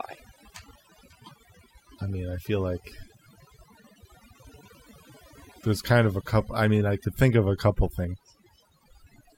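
Overdone noise removal runs through the whole clip, from the first second to the last. A denoiser set far too aggressively has suppressed any frequency band close to its noise estimate, removing the quieter parts of the speech along with the noise. The gaps between phrases fall to near silence speckled with twinkling tones. A spectrogram shows scattered isolated dots in the background and ragged holes through the speech harmonics, and the waveform shows flat, dead pauses.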